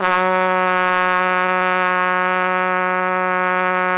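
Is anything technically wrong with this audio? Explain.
Yes, there are two playback problems, both from the receiving end of a call path. It's a G.711 mu-law channel, so nothing above 4 kHz comes through.

From 1.28 to 2.76 s there's a run of repeated stalls (stutter). About 31 tiny gaps are spread across that stretch, none longer than roughly 11 ms. Packets were showing up late, so the jitter buffer kept running dry, and each time the receiver just stretched out the last bit of sound until real data arrived again. That filler adds up to about 22% of the stretch. Nothing actually goes missing, but the sound comes out choppy and dragging.

From 3.50 to 3.88 s there's a jitter buffer slow-down. The buffer was trying to build up a reserve, so it repeated single pitch periods and small slices of quieter moments back to back. That adds about 38 ms, so the passage plays at roughly 91% speed. 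The pitch stays put, but the sound gets drawn out, as if it's lingering a beat too long.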